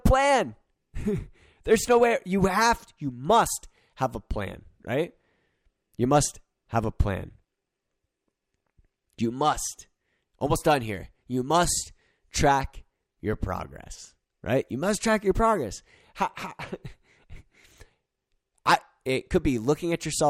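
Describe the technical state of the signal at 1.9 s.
At 1.9 s the speech signal is intact, with no technical fault present at that moment.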